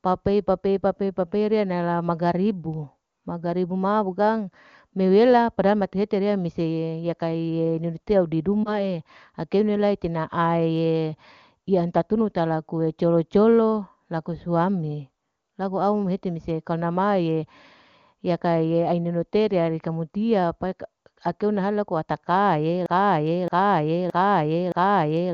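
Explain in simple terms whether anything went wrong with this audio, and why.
Two things go wrong in this speech. Around 8.63 to 8.92 s, lost AMR speech frames cause a brief dip or warble. A radio error wiped out what sounds like one 20 ms slice, and the phone's decoder guessed it back.

After "laku ataka'e" at 22.86 s, a broken-record loop starts. A 0.62 s piece repeats four times until the end, likely because the playback or stream stalled on its last piece.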